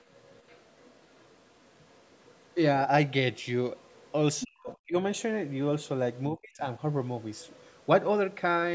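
From 0.00 to 2.54 s a faint second voice sits under the speech, about 30 dB down. This is the other side's voice leaking through, likely a loudspeaker echo the echo canceller failed to remove from the microphone. It returns at 3.77 to 4.12 s, as a brief, louder scrap at 4.40 to 4.45 s (about 10 dB down), at 4.69 to 4.76 s, at 6.15 to 6.20 s, and at 7.35 to 7.86 s. What sets it apart is that a voice is added rather than lost.

From 4.44 to 4.95 s and again from 6.30 to 6.66 s, the main speech is pushed down. It drops by up to about 40 dB in the first stretch and about 35 dB in the second, over roughly 0.4 s each time. This is speech suppressed in double talk: with both sides active at once, the canceller likely could not tell the talker from the echo and turned both down. It differs from leakage because the talker's own voice dips and breaks up instead of gaining a second voice.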